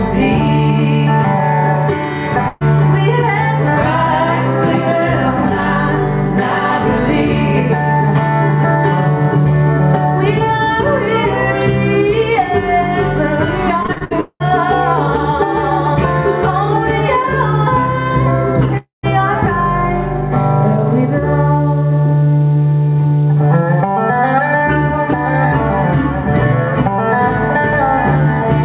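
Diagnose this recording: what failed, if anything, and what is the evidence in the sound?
A burst of packet loss on the network leg hits at 2.48 to 2.63 s. Roughly 0.12 s of audio is gone, bridged by a fading continuation of the preceding sound. On a spectrogram, the smeared continuation decays within the 4 kHz band of the G.711 call path, then the audio resumes abruptly.

Repeated packet loss (robotic sound) runs from 13.83 to 14.49 s. Seven separate gaps, the longest 195 ms, are each patched by extending the last sound, so about half this stretch is synthetic. The result is choppy. A waveform shows stuttering, repetitive segments interleaved with fragments of real audio.

From 18.77 to 19.05 s, the sound stretches into a decaying continuation and then drops to about 140 ms of silence before returning with material skipped. This is likely a long network dropout. On a waveform, the envelope tapers to a flat line. 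A spectrogram shows fading bands, then an empty column.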